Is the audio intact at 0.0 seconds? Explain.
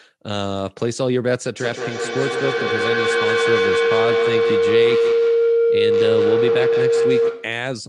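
Yes, the audio is intact at 0.0 seconds, with no fault present at that moment.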